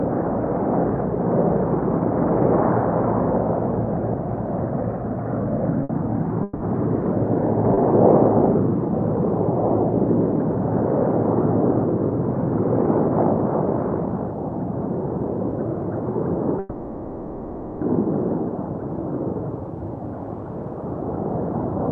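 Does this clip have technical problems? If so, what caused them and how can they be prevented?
Yes. A short stall from a late packet occurs at 5.83 s and 7.74 s. The last sound is held about 60 ms and 30 ms as the jitter buffer briefly empties, then resumes with nothing lost. A slightly deeper jitter buffer would prevent it.

A call audio freeze occurs from 6.43 to 6.63 s and from 16.59 to 17.84 s. The sound is stretched into a fading buzz or hiss for about 170 ms and then 1.22 s, without dropping to silence, and then continues where it stopped. It was likely caused by packets held up in the network. Reserving bandwidth or prioritising the audio stream would prevent it.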